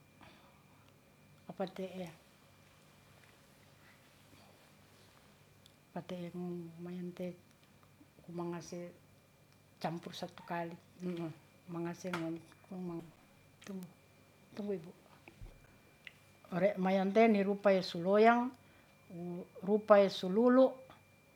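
A speech recording with two bit error spikes, single-sample ticks at 7.24 s (about −38 dBFS) and 13.83 s (about −26 dBFS), each from one flipped bit. Unlike a dropout click, nothing goes missing: the signal resumes exactly, so the tick is pure broadband.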